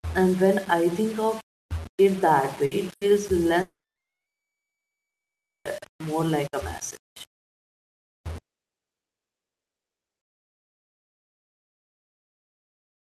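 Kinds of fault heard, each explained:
Low bit depth without dither: A grainy, gritty distortion runs through the whole speech clip, sitting roughly 20 dB below the signal and changing with it. This likely comes from rounding to about 5 bits with no dither. Unlike steady dithered hiss, this error tracks each sound.
Burst of packet loss: Two short gaps, at 2.65 to 2.74 s and 2.95 to 3.04 s, each lose 60 ms. The last sound is carried on as a brief fading buzz or hiss before speech resumes further along. The gap is too short to reach full silence, which sets it apart from a dropout.
Long network dropout: Two long stretches, 3.61 to 5.68 s and 8.41 to 10.32 s, are likely caused by audio failing to arrive. Each is mostly silence, about 1.9 s in the first and 1.8 s in the second, before speech returns with that part missing. The length and silence distinguish it from a burst.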